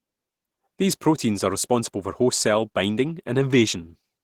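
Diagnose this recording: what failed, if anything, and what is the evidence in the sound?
Opus compression runs throughout the speech, introduced at the codec stage. Plainly audible hoarse, grainy roughness fits the likely cause: a rate around 16 kbps forcing hybrid mode, with noise filling starved bands while content still reaches 20.3 kHz.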